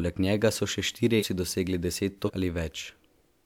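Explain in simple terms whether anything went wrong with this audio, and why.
Two spots have compressed frames skipped. Right after "njega so še štirje", around 1.19 to 1.23 s, the speech jumps ahead by roughly a third of a second, and again at 2.25 to 2.30 s by about a fifth of a second. Chunks of the encoded audio, which fit frames of about 46 ms each, were missing or rejected, so playback leapt forward.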